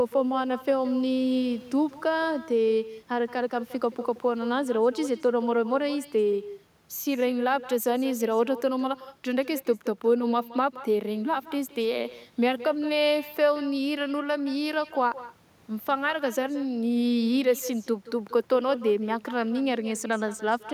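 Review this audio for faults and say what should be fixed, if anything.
Echo with no canceller runs throughout: every phrase returns roughly 150 ms later, about 16 dB down, thin, as the far end's loudspeaker feeds its microphone. Unlike room reverberation, it is a distinct delayed copy rather than a smooth decay. Enabling acoustic echo cancellation at the far end, or having that participant use headphones, would prevent it.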